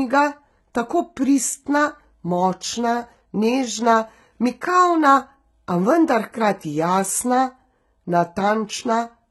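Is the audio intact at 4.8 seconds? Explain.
No. At 4.8 seconds the speech carries HE-AAC compression, which runs through the whole clip. The treble sounds rebuilt rather than recorded: it is likely spectral band replication, with lower bands copied upward under a coarse envelope. Harmonics fail to line up above the crossover, so s sounds come out gritty and metallic, and nothing reaches above about 11.8 kHz. The heavy damage fits a very low bitrate of around 16 kbps.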